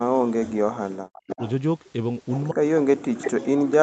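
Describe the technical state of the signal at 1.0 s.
At 1.0 s the signal is inside a stretch of speech suppressed in double talk, running from 0.00 to 1.39 s. The echo canceller likely could not tell the near talker from the far-end echo while both sides spoke, so it turned the near speech down along with the echo. The result is a deeply attenuated voice, dipping by roughly 40 dB at its worst, on top of the call path's normal 8 kHz band limit.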